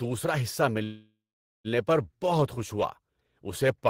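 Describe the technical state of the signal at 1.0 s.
At 1.0 s the signal sits inside a call audio freeze running from 0.83 to 1.67 s. Packets were likely held up in transit, so the jitter buffer drained and the receiver kept extending the last sound for about 810 ms. That comes out as a fading buzz that drops into about 470 ms of silence. The speech then resumes intact with "پر بہت خوش", nothing lost but everything after it shifted about 810 ms later.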